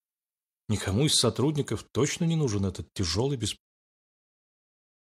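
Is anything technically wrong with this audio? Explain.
No, nothing stood out on listening; the level eases down in a smooth fade-out from around 3.5 s to 3.58 s, just as an editor would finish a clip.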